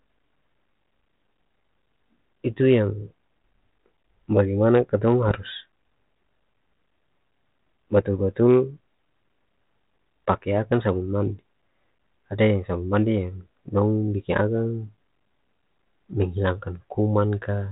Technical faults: bit errors on an ADPCM link

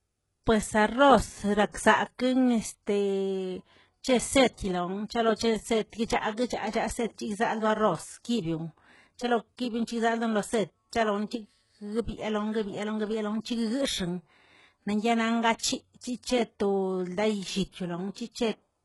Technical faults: HE-AAC compression

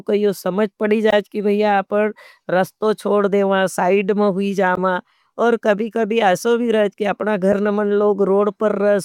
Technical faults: damaged data in a compressed stream

